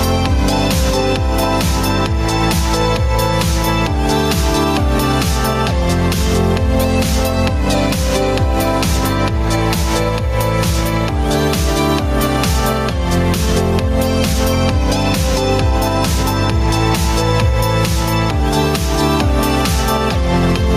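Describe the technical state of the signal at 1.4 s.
At 1.4 s the signal shows gain pumping, present throughout: the gain ducks by around 5 dB under each loud sound, likely from gain set far too high feeding a fast limiter. Unlike a noise gate, the background rises rather than cutting out.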